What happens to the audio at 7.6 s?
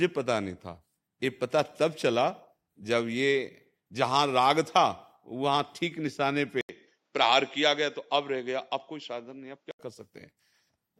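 At 7.6 s the speech sits inside a stretch from 6.61 to 9.79 s where the sound turns duller and boxier, most likely because the input switched to a poorer device. It opens with an 80 ms gap of silence. Nothing above 7.6 kHz gets through, and a faint new noise floor appears while the loudness stays about the same. A spectrogram shows the upper band cut flat, and the waveform shows a brief dropout at the switch.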